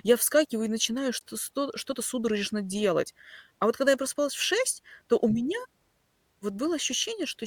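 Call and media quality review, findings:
Gap between stream segments, 1.19 s: a 16.3 ms hard-edged hole of silence cuts into the speech. Waveform shows a flat near-silent run with abrupt edges; spectrogram shows a thin full-band blank column. Segment timestamps at what fits a 2 s boundary don't meet, so the player pads silence. No audio lost.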